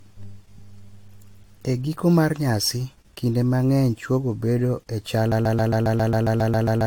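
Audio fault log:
Throughout: generation loss. The speech sounds swirly, smeared and hollow, with blurred consonant attacks, likely from about five rounds of AAC-LC encoding at 96 kbit/s, each requantising on a shifted frame grid. A spectrogram shows patchy holes and nothing above 19.1 kHz.
5.32 s to the end: broken-record loop. Right after "chwogo bedo e chal", a 135.6 ms fragment repeats back to back about 11 times, likely a stalled player or stream resending its last buffer. The waveform shows identical tiled blocks, and the spectrogram shows stripes.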